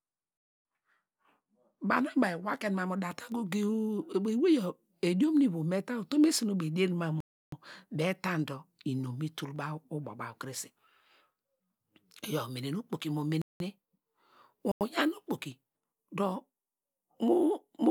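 Speech clip with three abrupt dropouts into dead silence: 7.20–7.52 s (about 320 ms), 13.42–13.60 s (about 186 ms, right after "umene nu okpoki mo"), and 14.72–14.81 s (about 93 ms). These are blocks of digital silence, likely where output buffers went unfilled in time. The last two match 8192- and 4096-sample buffers.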